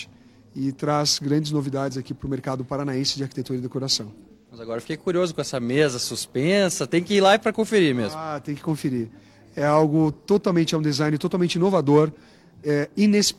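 Between 4.32 and 4.51 s the audio turns briefly smeared and phasey, a symptom of AAC frame loss with concealment. About 128 ms of data went missing, consistent with roughly three consecutive frames, and the decoder patched the gap by reusing and reshaping the last good spectrum.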